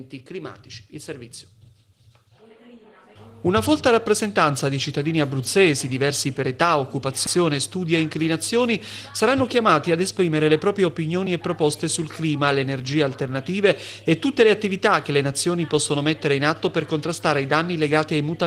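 Nothing is technically wrong with the audio in this clip.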